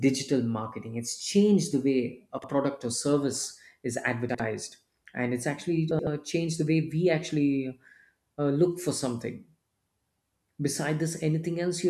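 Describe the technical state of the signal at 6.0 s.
At 6.0 s the speech is inside a frames-out-of-order fault from 5.91 to 6.07 s, between "and it's actually" and "changed the way". Two adjacent runs of three frames, each run about 78 ms, were decoded swapped, so the stretch plays halves-reversed as a garbled flutter. No time is lost.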